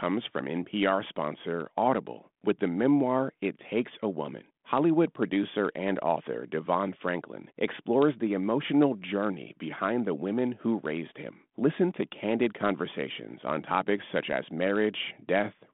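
It's a speech clip with nothing technically wrong with it.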